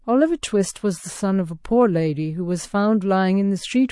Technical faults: MP3 compression

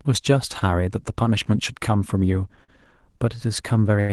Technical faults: short stall from a late packet

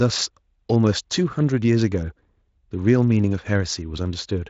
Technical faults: none

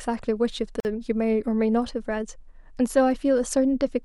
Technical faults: gap at a join of encoded pieces

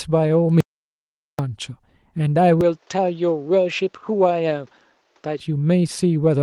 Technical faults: audio dropout to silence; input switched to a poorer device; short concealed packet loss

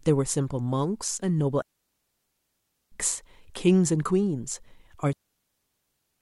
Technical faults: digital wireless dropout

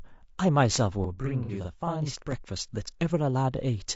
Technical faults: low-delay AAC compression; loud pop; channel delay (doubling); AAC frame loss with concealment

